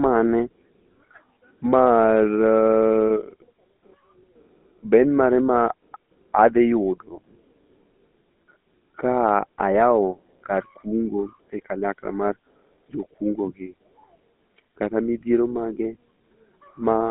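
Speech passed through the GSM full-rate codec for the whole clip: band-limited to roughly 200 Hz to 3.7 kHz, with a plainly buzzy, gravelly roughness from the sparse pulse excitation, consistent with 13 kbps coding.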